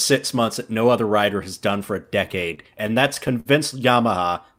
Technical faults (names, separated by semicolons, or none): repeated stalls (stutter)